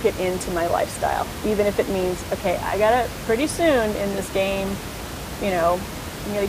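No system faults are audible in the speech, and the room noise, sitting about 10 dB below the talker, belongs to the recording itself.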